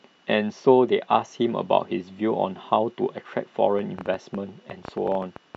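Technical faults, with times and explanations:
3.79–5.56 s, train of clicks: about 15 pulses of much the same shape at roughly 8.5 per second, unevenly spaced and peaking around 5 dB above the speech, ticking through pauses too. The likely cause is interference or a faulty connection or power supply, not random crackle.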